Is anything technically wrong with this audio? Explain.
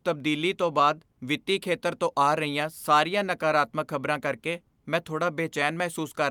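No, the speech signal shows no technical faults that a listener can hear.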